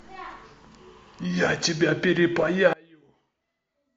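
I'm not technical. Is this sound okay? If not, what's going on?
No. From about 2.73 s to the end, the speech suddenly goes faint, almost vanishing. Likely cause: one channel inverted, so the two sides cancel when combined.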